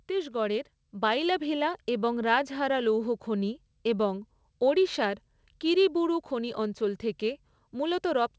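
Speech, with a microphone volume stepped up at about 1.02 s: voice and background jump together by about 4 dB in a single step, as the call software raises the device's input volume after judging it too quiet. The call path passes audio normally, with nothing above 8 kHz, which fits a G.722 codec.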